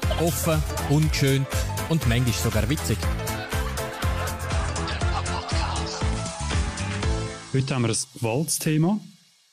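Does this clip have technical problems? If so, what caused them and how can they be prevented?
Yes. From 4.25 s to 8.20 s the receiver lost the digital stream, and the digital radio blended to analogue FM with a 317 ms cross-fade each way. The level stays the same, and hiss appears roughly 35 dB below the signal. A better antenna or position with a stronger digital signal would keep the receiver from falling back.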